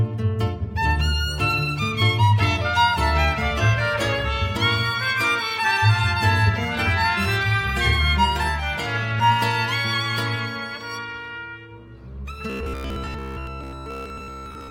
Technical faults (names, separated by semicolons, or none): robotic sound from repeated short buffers